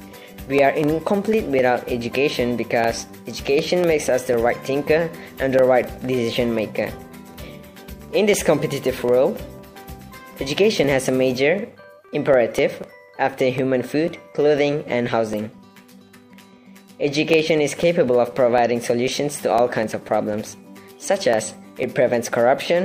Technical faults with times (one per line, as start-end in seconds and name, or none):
0.08-22.58 periodic USB or driver dropouts